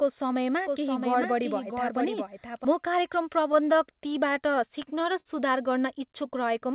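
Speech heard through a narrowband call path, with nothing above 4 kHz, which fits G.711 mu-law at 64 kbps. From 0.67 to 2.65 s it has a doubled audio track. A second, full-band copy of the speech trails the original by roughly 0.7 s at around 5 dB lower level, likely because the signal was captured twice along a slower route. On a spectrogram this looks like a duplicate of the harmonic pattern, shifted to the right. It has no reverberant smear, and it begins and ends with hard edges. Between 3.52 and 5.27 s there are repeated stalls (stutter). The audio stops nine times, each time because the incoming stream briefly ran dry, and the receiver fills each pause by stretching the last sound. The filled gaps add up to about 133 ms and the longest is 53 ms, but nothing is lost. In the waveform these appear as short, repetitive segments that break the natural rhythm. From 6.06 to 6.74 s a jitter buffer slow-down plays the speech at about 96% speed while keeping the pitch, adding 36 ms. 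This happens because single pitch cycles are repeated to rebuild the buffer's reserve. A spectrogram shows slightly lengthened, evenly repeated harmonic stretches with no change in pitch.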